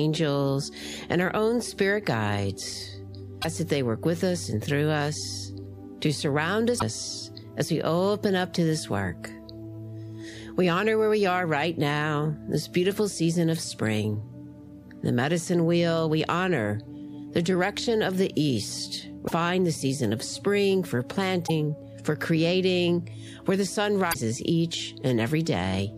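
Damaged data in a compressed stream at 3.38, 6.75, 19.24, 21.44 and 24.10 s: corrupted bytes make the decoder misread frames and lose sync while it hunts for the next header, so each spot produces a brief chirp or blip lasting about 0.06 to 0.07 s.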